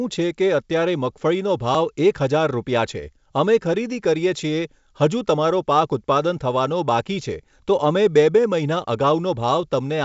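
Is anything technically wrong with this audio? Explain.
No, nothing technically wrong here.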